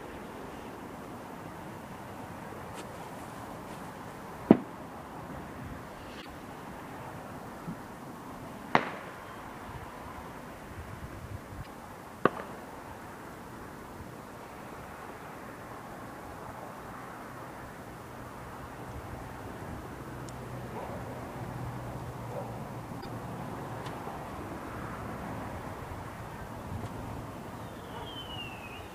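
At 6.18–6.26 s, 11.59–11.67 s and 22.98–23.06 s, damaged data in the compressed stream makes the decoder lose sync, producing brief glitches.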